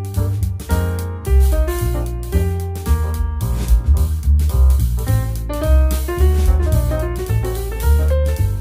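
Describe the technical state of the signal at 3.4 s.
At 3.4 s the signal is intact, with no audible fault at that moment.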